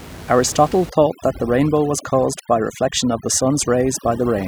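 From 0.90 s to the end, the speech shows overdone noise removal. A noise reduction stage was set too strong. It pushes individual frequency bands down hard whenever they sit close to its noise estimate. The room noise, only about 16 dB below the speech, gets caught in that. So do the quiet parts of the voice. The background in the pauses drops and breaks up into twinkling specks.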